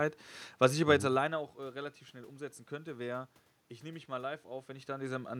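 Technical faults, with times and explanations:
Nothing technical goes wrong here; the room background and the level shifts near 1 s and 4.5 s as the talker moves are just part of the recording.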